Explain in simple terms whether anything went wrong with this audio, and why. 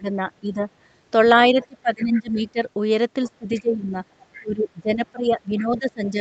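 Speech suppressed in double talk happens at 0.0 to 0.67 s, 1.5 to 2.59 s, 3.38 to 3.97 s and from 4.39 s to the end. In these stretches the speaker's voice sinks, thins out or breaks into pieces. This likely happened because both people on the call talked at once. The echo canceller couldn't tell the speaker apart from the other person's voice coming out of the loudspeaker, so it turned everything down. The deepest drop is in the stretch from 1.5 to 2.59 s.

The other side's voice leaking through appears at 1.61 to 1.67 s, 2.0 to 2.51 s, 3.25 to 3.61 s and 4.23 to 4.45 s. A second, fainter voice slips into the recording in quiet scraps. The longest and clearest one is around 2 s. The speaker's device was playing the other person aloud, and the echo canceller likely failed to strip all of that sound from the microphone, so some of it was sent back along with the speaker's voice.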